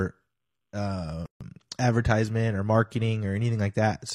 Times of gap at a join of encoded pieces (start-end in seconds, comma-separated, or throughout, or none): 1.26-1.41